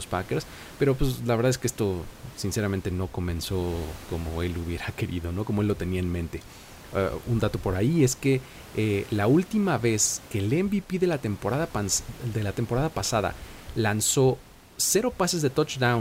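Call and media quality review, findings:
No faults found in clip.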